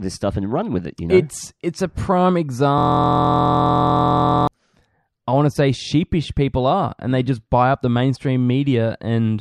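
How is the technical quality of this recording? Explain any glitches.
A system hang loop runs from 2.78 to 4.47 s, just after "it's it's a prime". The playback froze while the hardware kept replaying one 23.22 ms slice, which fits a 1024-sample buffer, dozens of times over, giving a steady 43.1 Hz buzz.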